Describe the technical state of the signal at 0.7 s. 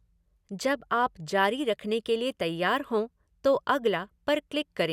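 At 0.7 s the speech signal is intact, with no dropout, clipping, distortion or other fault audible at that point.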